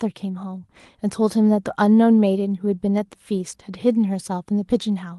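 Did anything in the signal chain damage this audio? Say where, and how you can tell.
No, the speech has passed through a working WebRTC call path with Opus coding, its content stopping at about 12 kHz as that codec's bandwidth setting would produce, and no stage in the chain has done anything to it beyond that.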